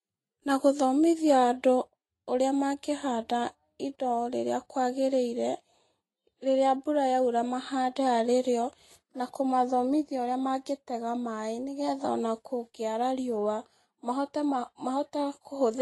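From start to finish the speech lacks anything above 11.8 kHz, with layered codec artefacts, likely transcoding between lossy codecs: Vorbis at 31 kbit/s re-encoded as MP3 at 64 kbit/s.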